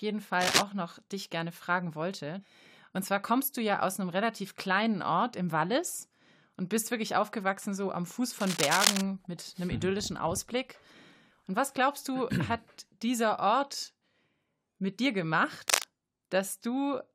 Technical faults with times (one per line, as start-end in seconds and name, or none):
0.41-0.62 cable scratch noise
8.40-9.01 cable scratch noise
15.68-15.87 cable scratch noise